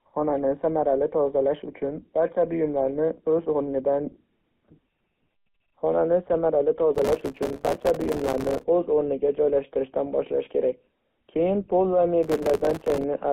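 Throughout, a GSM full-rate codec gives the speech a buzzy, gravelly roughness and a narrow 200 Hz to 3.4 kHz band, unlike a plain band-limited line, which stays smooth.

From 6.95 to 8.63 s, and again from 12.23 to 13.04 s just after "pol va", processor overload crackle breaks the audio into gritty, tearing bursts of tiny silent gaps, each a few milliseconds long. Unlike a single dropout, it is rapid and continuous while it lasts.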